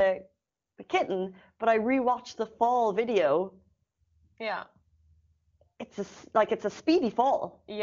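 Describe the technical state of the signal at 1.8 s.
At 1.8 s the speech is intact, with no fault at that moment, coming through the AMR wideband (HD Voice) path cleanly.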